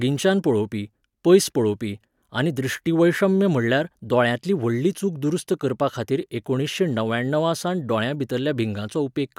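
Nothing in the speech stood out as a technical problem on listening.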